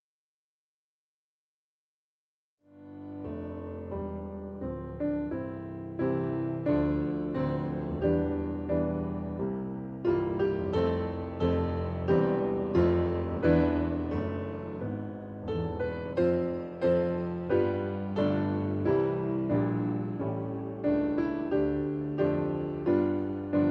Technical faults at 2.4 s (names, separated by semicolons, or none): none